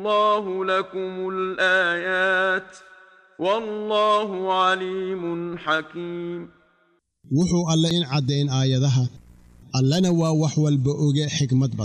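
CD skip at 7.90 s: the laser jumped to another turn of the spiral, so a mute of a few milliseconds is heard as a tick before playback resumes elsewhere.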